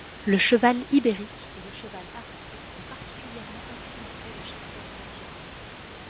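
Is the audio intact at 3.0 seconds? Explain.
Yes, the audio is intact at 3.0 seconds, with no fault at that moment.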